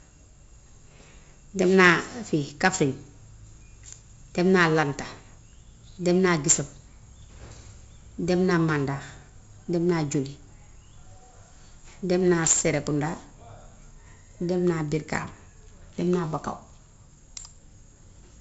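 From start to end the speech carries heavy 4-bit ADPCM compression: each sample is coded as a coarse adaptive step, so gritty hiss rides every loud syllable and sharp onsets smear. A spectrogram shows level-tracking broadband noise and nothing above 7.7 kHz, which fits 64 kbps.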